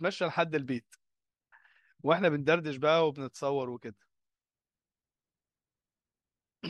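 No technical faults can be heard anywhere in the recording.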